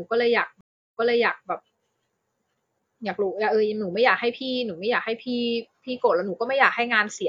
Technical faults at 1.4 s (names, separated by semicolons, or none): stream reconnect